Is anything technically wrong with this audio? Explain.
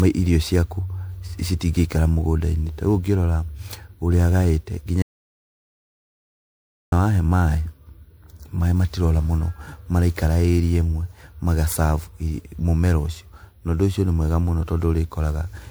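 Yes, two faults.

Throughout the clip, the speech sounds swirly, smeared and hollow, with blurred attacks. This is likely generation loss from roughly seven passes through an MP3 codec at about 128 kbit/s, each pass requantising on a shifted frame grid.

From 5.02 s to 6.92 s, an audio dropout to silence removes about 1.9 s of speech. The gap is silent with no room tone, and speech returns on "wahe maĩ". This likely comes from lost input while recording continued.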